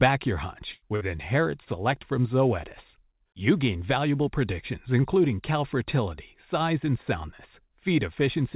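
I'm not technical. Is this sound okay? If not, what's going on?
No. There are two bursts of packet loss, at 0.72 to 0.84 s and 0.96 to 1.03 s. Each time the call briefly lost its audio, and the receiver stretched the last sound into a fading buzz or hiss. Then the speech jumps ahead, with about a tenth and then about four hundredths of a second gone.

At 1.65 s there is a short concealed packet loss, only about two hundredths of a second. Unlike the bursts, it isn't a held, fading sound. It's a quick smear or wobble, where a short sound such as a consonant can vanish.

The narrow, phone-like tone with nothing above 4 kHz comes from the call line itself.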